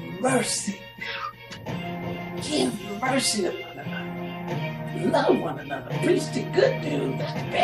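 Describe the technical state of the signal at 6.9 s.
At 6.9 s the signal suffers repeated frames. Between 6.88 and 6.92 s a run of compressed frames was delivered twice, so the decoder plays the same 46.4 ms block a second time, a length that fits two frames of about 23 ms each. The listener hears a brief stutter as that slice of sound replays once, and everything after it arrives 46.4 ms later than it should, lengthening the audio by that amount.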